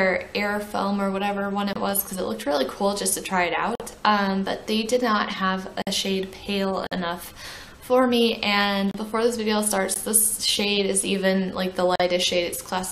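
Hard-edged silent holes of about 16 to 50 ms interrupt the sound at 1.73, 3.75, 5.82, 6.87, 8.91, 9.94 and 11.96 s, aligned to a one-second grid. These are gaps between stream segments: segment timestamps leave small spaces, which playback fills with silence.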